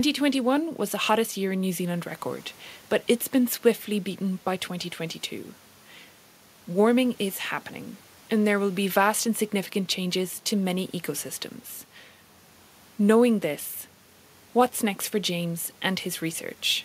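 Nothing stood out on listening to the speech, with only the room's own background noise sitting quietly underneath it, about 33 dB below the talking.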